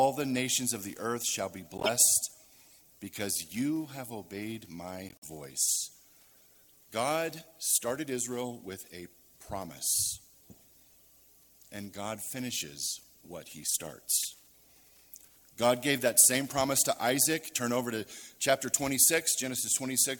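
Three bursts of corrupt frame decoded appear in the audio, at 1.78–1.89 s, 5.09–5.25 s and 14.20–14.26 s, peaking around −15, −30 and −20 dBFS. Damaged compressed frames were played anyway, scattering energy onto wrong frequencies as chirps or noise, rather than the gaps or smeared repeats of lost frames.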